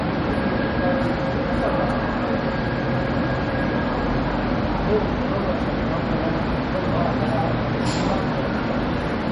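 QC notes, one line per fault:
Throughout, MP3 compression: nothing above 10.5 kHz, so the top end sounds dull. Weak detail flickers in and out from frame to frame, giving a plainly audible watery, swirly texture. It's likely a starved MP3 encode, with damage that fits roughly 40 kbps.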